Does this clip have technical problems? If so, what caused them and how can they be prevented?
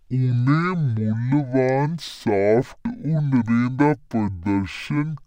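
Yes. The speech suffers from stereo read as mono throughout. Alternating left and right samples were played back as one channel. So the clip runs at half speed and sounds an octave low. A faint mirrored copy also sits in the upper spectrum. To prevent it, read the file's channel count from its header and de-interleave stereo before playback.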